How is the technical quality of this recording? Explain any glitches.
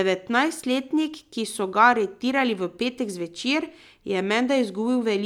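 No technical glitches can be heard in the recording, and the speech signal stays continuous and intact the whole way through.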